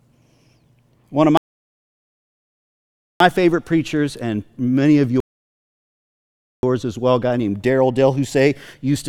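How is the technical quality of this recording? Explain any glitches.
The recording has two rebuffering stalls, which interrupt the speech twice.

From 1.37 to 3.20 s the sound drops to silence and resumes cleanly on "favorite preachers and many", adding about 1.83 s. From 5.20 to 6.63 s, right after "preachers and many of", it stops again and picks up at "as well a guy", adding about 1.43 s. In both cases the player exhausted its downloaded audio and paused until more data arrived, so no speech is lost and only dead air is inserted.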